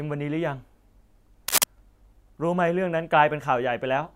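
From 1.48 to 1.64 s, cable scratch noise: a dense, uneven rustling burst, somewhat louder than the speech, likely from a worn connector or cable being moved.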